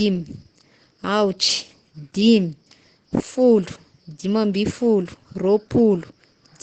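Opus compression runs throughout: the speech is heavily muffled and hoarse with nothing above 9 kHz, likely from Opus's speech mode at around 12 kbps.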